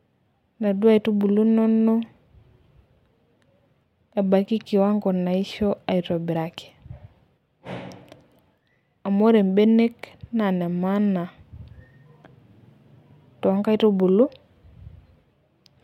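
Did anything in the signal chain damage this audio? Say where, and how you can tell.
No, no damage is audible.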